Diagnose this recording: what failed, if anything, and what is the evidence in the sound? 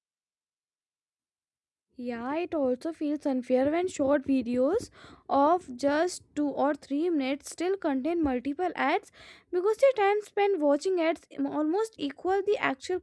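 Nothing failed: no stage in the chain shows any audible fault anywhere in the speech.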